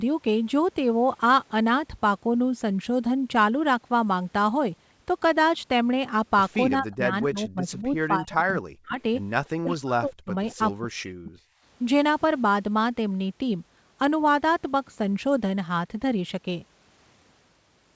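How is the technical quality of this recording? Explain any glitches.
The speech is band-limited to 8 kHz, consistent with a G.722 call path at 64 kbps, and it drops out three times in the middle of the clip.

Speech suppressed in double talk, 6.79–8.99 s, 9.48–10.32 s and 10.81–11.37 s: the talker's level falls away in chunks, by around 40 dB at its deepest, for roughly 1.5 s, 0.7 s and 0.5 s in total. The likely cause is an echo canceller that, with both ends talking at once, could not separate the near talker from loudspeaker echo and attenuated both.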